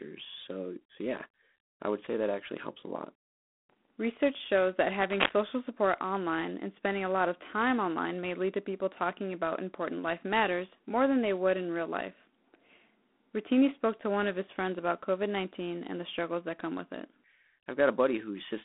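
From the start, the speech carries G.726 ADPCM damage: a gritty, rasping hiss that swells and fades with the talker's level, which sets it apart from steady background noise. The coder sends only a few bits describing how each sample differs from a running prediction, and at this coarseness, which points to 24 kbit/s, the prediction errors become audible. The telephone band runs from roughly 200 Hz to 3.5 kHz, with nothing above 3.8 kHz.

From 5.00 to 5.33 s, between "shows that" and "support online and spending", cable scratch noise cuts in. It is a dense, uneven burst of scratching and rustling, roughly as loud as the speech itself. The cause is likely a worn cable, connector or control being moved, so that its contact resistance jumps around rapidly. Unlike a single click or dropout, it is a ragged cluster that lasts about a third of a second.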